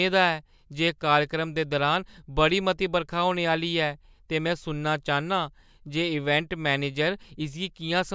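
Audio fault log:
No audible faults detected.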